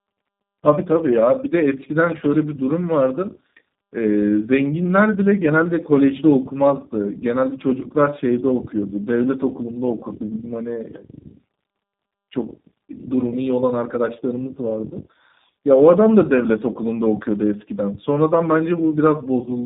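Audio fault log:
Throughout, tandem speech coding: rough, muffled and warbly, nothing above 3.7 kHz, which fits iLBC then G.729A stacked, G.729A recoding iLBC's damage.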